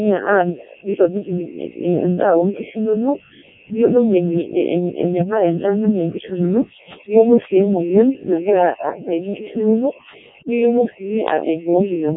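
Throughout, Codec 2 vocoding: speech is rebuilt from sine waves using only pitch, voicing and envelope, sounding robotic and buzzy, nothing above 3.8 kHz, consistent with the 0.7 kbit/s mode.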